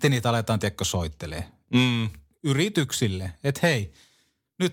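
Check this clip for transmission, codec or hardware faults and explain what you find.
The speech signal holds steady throughout, with nothing in the transmission path, the encoding or the playback hardware disturbing it.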